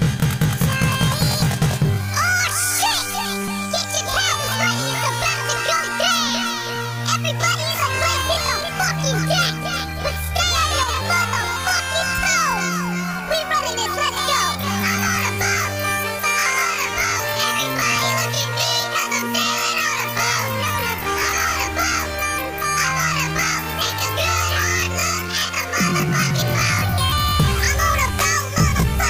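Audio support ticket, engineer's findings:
Brief level dip, about 6 dB, 10.84 to 10.89 s, roughly 50 ms, abrupt onset and recovery. Consistent with one channel drops out: with one stereo side momentarily missing, the mono sum loses half its shared content, and anything unique to that side vanishes. Likely a momentary channel dropout in the stereo feed or link upstream of the downmix.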